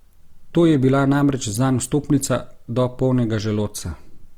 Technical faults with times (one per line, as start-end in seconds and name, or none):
0.00-4.37 Opus compression